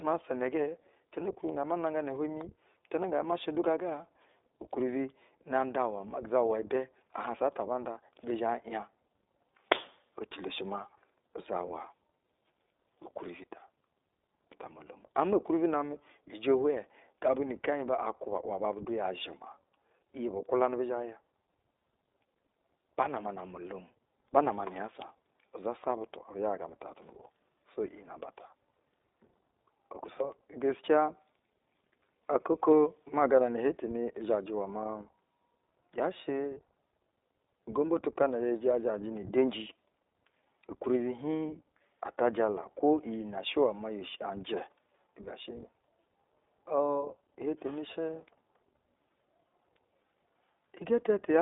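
Speech that's been through the iLBC codec for its whole length, so it's cut off above about 3.8 kHz with the low end thinning below 300 Hz. Each 20 ms frame is coded on its own, leaving a plainly rough, synthetic edge that fits the 15.2 kbps mode.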